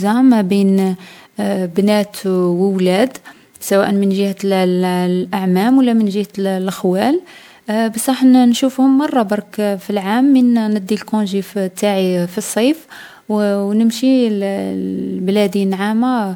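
Across the whole speech clip the sound is swirly and hollow, with a smeared, watery texture and consonant attacks that blur, far rougher than a single pass at this quality would leave. This is generation loss, likely from the audio being decoded and re-encoded about seven times through a lossy codec, which points to MP3 at 128 kbit/s. Each pass requantised the signal on a shifted frame grid, so noise and spectral holes accumulated. Content reaches up to about 20 kHz.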